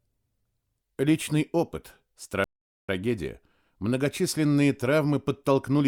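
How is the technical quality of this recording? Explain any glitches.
The recording has one glitch. At 2.44 s a playback stall cuts the sound to silence for about 0.45 s. It resumes at 2.89 s. The player likely ran short of data or was briefly blocked.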